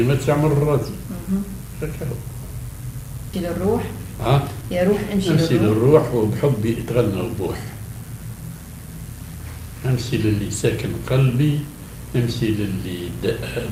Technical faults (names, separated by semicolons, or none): skip ahead; jitter buffer speed-up